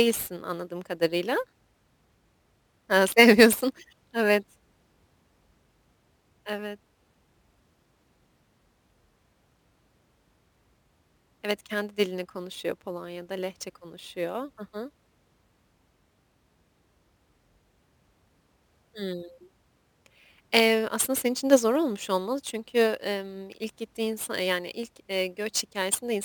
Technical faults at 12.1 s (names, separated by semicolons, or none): crude rate conversion